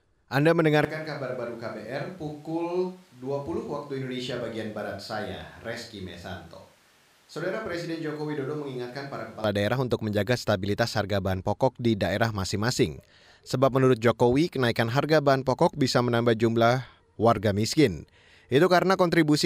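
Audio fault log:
0.85–9.44 s, switch to a distant microphone: the speech abruptly turns roomy, hollow and bass-light, about 10 dB quieter, likely because the close microphone's feed dropped out.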